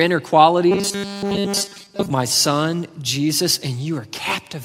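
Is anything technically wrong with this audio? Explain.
Yes. From 0.71 to 2.10 s, just before "my son", the speech turns into a robotic sound from repeated short buffers. The likely cause is late-arriving audio, with the playback filling the gaps by looping the last 5 ms chunk, so most of the stretch is repetition rather than real speech. This imposes a rigid 200 Hz metallic buzz that only loosely follows the words. A spectrogram shows flat harmonic lines every 200 Hz, and the waveform repeats identical 5 ms cycles.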